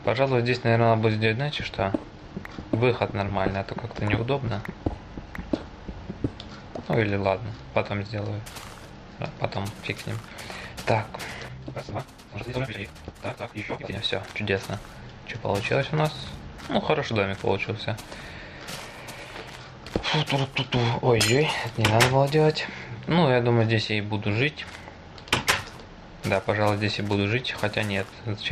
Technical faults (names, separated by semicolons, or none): none